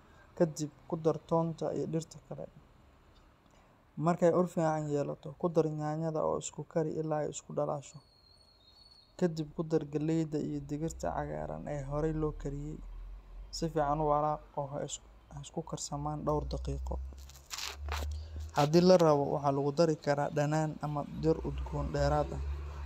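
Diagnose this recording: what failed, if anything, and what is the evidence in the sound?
Nothing in the speech signal points to a failure at any stage, from capture and conversion through processing, transmission, storage and playback.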